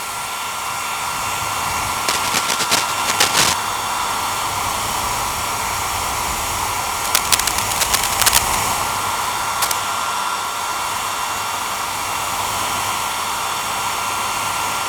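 A worn cable or connector, likely being moved, causes cable scratch noise from 2.08 to 3.54 s, 7.04 to 8.63 s and 9.61 to 9.76 s: rough scratching bursts about as loud as the sound itself.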